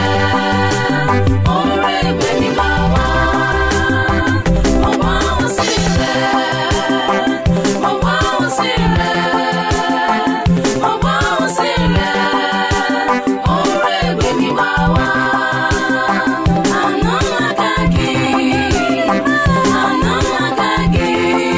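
Nothing technically wrong turns up anywhere in this audio, so there's no fault to point to here.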